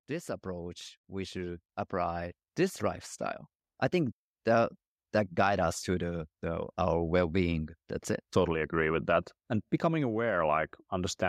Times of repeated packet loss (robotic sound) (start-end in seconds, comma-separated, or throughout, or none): none